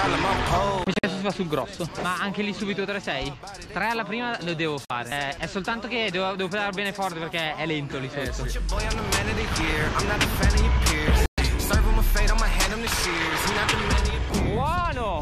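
Short silent holes, a scattered cluster at 0.84 to 1.04 s, then 4.85 to 4.90 s and 11.26 to 11.38 s, are digital broadcast dropouts: the receiver muted through corrupted frames.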